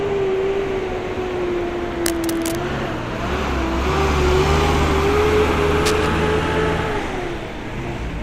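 A worn cable or connector likely shifted, causing cable scratch noise in this everyday-sound clip: rough scratching bursts at 2.06–2.55 s and a louder one at 5.86–6.07 s.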